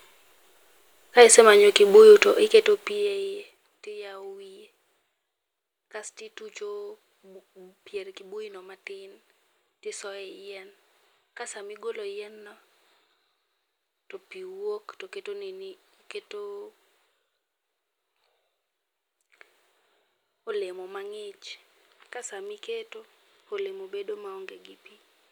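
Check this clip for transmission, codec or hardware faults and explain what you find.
One fault stands out in this speech clip. Zipper noise runs from 2.29 to 3.68 s, between "ka isemanyo kibuyu to" and "tiyawo wiye". The level is pulled down by roughly 25 dB in unsmoothed 1 dB steps, about twenty each second, so every jump leaves a small click and the fade sounds like a fast ticking zip riding over the speech.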